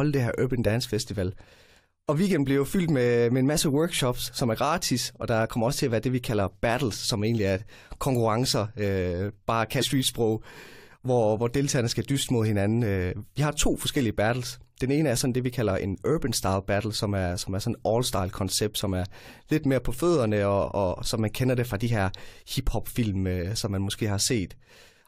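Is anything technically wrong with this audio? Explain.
Yes. At 9.81 to 9.83 s, just after "er konkurrencer øh bare", the speech jumps forward with a brief smeared blip. These are compressed frames skipped: about 200 ms dropped, consistent with roughly seven 23.2 ms frames.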